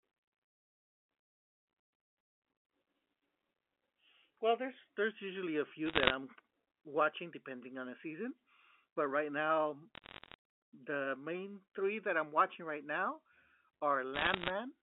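Bit errors on a digital phone line crackle at 5.86–6.14 s after "there's there's usually a", at 9.95–10.34 s after "season but right now", and at 14.14–14.50 s. Flipped bits corrupt single samples, which show as lone waveform spikes and thin vertical spectrogram streaks.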